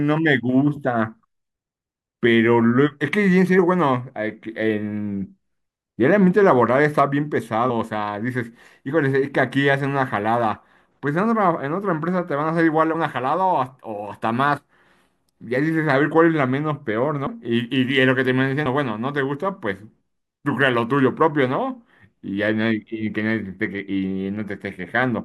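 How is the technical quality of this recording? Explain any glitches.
The recording has six short dropouts where compressed frames were skipped, at 3.58, 7.69, 12.94, 14.56, 17.25 and 18.65 s. At each one the speech jumps ahead, by roughly 50 ms at most points, about 70 ms at 14.56 s and about 150 ms at 17.25 s. The jump sizes fit whole frames of about 23 ms going missing or being rejected by the decoder.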